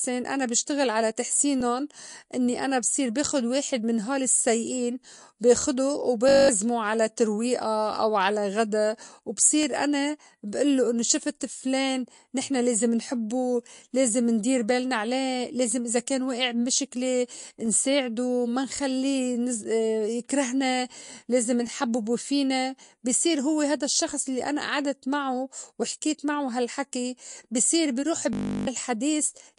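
Throughout, the speech is watery and swirly, with nothing above 10.6 kHz, likely MP3 compression at a low bitrate around 48 kbps; unlike the glitches below, it never stops.

Overlapping chunks give a brief click-like stutter at 1.61, 5.62, 9.63, 13.65, 17.66 (just after "إذا كان وائع بمِشِكلة"), 21.67 (just before "فينا بصير هوّ هيدا") and 25.68 s. Each chunk starts 13 ms before the last ended, so that piece plays twice. The strict 4 s spacing sets it apart from random dropouts.

A system hang loop replays one 20 ms slice as a steady 50 Hz buzz, from 6.29 to 6.49 s (10 repeats) and from 28.33 to 28.67 s after "هالحكي بي صير بيروح" (17 repeats), losing about 200 ms and 300 ms of audio. Unlike the overlaps, it is a sustained exact repeat rather than a single doubled piece.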